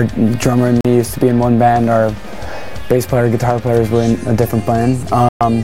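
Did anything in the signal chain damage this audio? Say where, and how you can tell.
Yes. The sound cuts out twice, leaving silent holes: one of 41 ms at 0.81 s, and a longer one of 122 ms from 5.29 to 5.41 s. After each gap the audio resumes further along, as though it had kept playing underneath. That points to the playback stage, likely a Bluetooth dropout: packets on the wireless link to the headphones arrived too late and were discarded, so the output went silent until good data came through.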